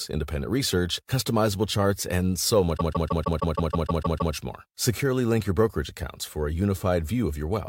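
Repeated frames at 2.76 to 4.33 s, after "customizable charts and so": a 156.7 ms block of frames plays ten extra times, stuttering and adding 1.57 s.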